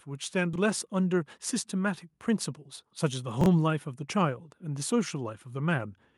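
From 0.05 s to 0.92 s there is automatic gain rising. The gain control judged the input too quiet and pushed its gain up slowly. The level climbs by about 3 dB over nearly a second. Speech and background noise swell together. No single jump marks it. The whole sound just grows louder at the start.

At 0.53 s, during that rise, come chunks out of order. A block of about 23 ms arrived one block late. It played after the block meant to follow it. That length fits a 1024-sample block at 44.1 kHz. Nothing is missing, but the sequence is swapped. Three hard joins result. A brief jumbled stutter is heard, ending at 0.58 s.

The same fault returns from 3.41 s to 3.46 s. Again one 23 ms block lands a step late. Again there is a short garbled blip.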